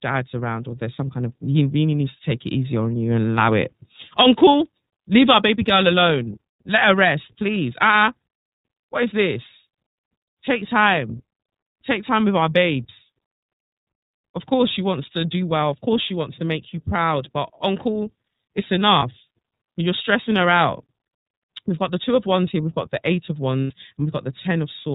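Speech here runs through the iLBC codec the whole way, which is why it sounds band-limited below 4 kHz and a bit rough and synthetic, consistent with the 13.33 kbps, 30 ms frame mode. There are also lost iLBC frames at 18.99 s (about 30 ms) and 23.63 to 23.71 s (90 ms), each filled with a held, slightly buzzy concealment tone before the voice snaps straight back.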